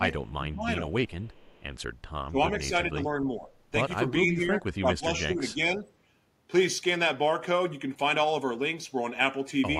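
From 0.37 to 0.92 s, an echo canceller facing double talk likely mistook the talker for loudspeaker echo and turned the line down. This is speech suppressed in double talk: the speech dips in pieces by about 15 dB, across roughly 400 ms in total.

From 1.08 to 1.63 s comes an echo leak. The far end's canceller likely let part of its microphone pickup through, so a faint copy of the speech returns 417 ms late, about 35 dB below it.

The suppression recurs from 2.27 to 3.48 s, again about 15 dB deep over roughly 0.7 s. It happens once more from 4.25 to 5.85 s, shallower at about 10 dB and spread across roughly a second.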